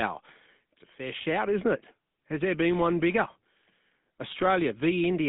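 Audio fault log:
Throughout, GSM full-rate codec: the speech has a plainly audible buzzy, gravelly roughness, consistent with a 13 kbps full-rate coder. It models the vocal tract as a filter and excites it with a coarse train of regularly spaced pulses, so fine detail in the voice is lost. On a spectrogram, energy sits between 150 Hz and 3.7 kHz with a hard ceiling at 3.8 kHz. Harmonics look smeared and grainy, and the waveform looks rough.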